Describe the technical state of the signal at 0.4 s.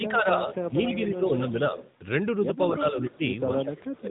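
At 0.4 s the speech sits inside a stretch of speech suppressed in double talk, running from 0.00 to 0.78 s. The level dips by up to about 15 dB across roughly half a second in total, most likely because an echo canceller mistook overlapping talk for loudspeaker echo and attenuated it. The waveform envelope shrinks in uneven chunks, and the spectrogram shows faded, patchy energy.

The whole signal also carries AMR narrowband mobile codec coloring, clearly audible as a buzzy, synthetic quality. That texture fits a mode of about 10 kbps, where the vocal-tract model is driven by a few pulses per 5 ms subframe. On a spectrogram, energy stops sharply at 3.8 kHz, leaving nothing above it.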